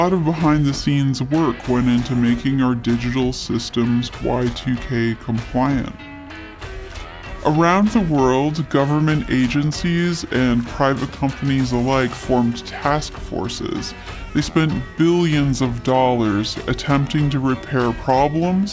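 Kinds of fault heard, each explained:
Wrong sample rate: the sound runs at 0.73 speed and 5.55 semitones lower together, fitting 22 kHz audio played at 16 kHz. Pitch-shifting alone would keep tempo.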